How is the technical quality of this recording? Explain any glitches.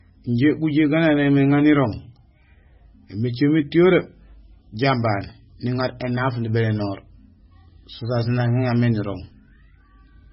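The recording is heavily degraded from start to finish. The speech sounds watery and swirly, s sounds carry metallic chirps, and there is nothing above about 5.6 kHz. The likely cause is heavy MP3 compression, consistent with a very low bitrate near 16 kbps, where the encoder cuts the treble and lets weak frequency lines flicker between frames.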